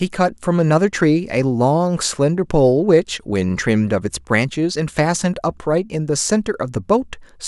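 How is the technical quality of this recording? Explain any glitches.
Nothing stood out on listening to the recording, and there were no glitches to explain.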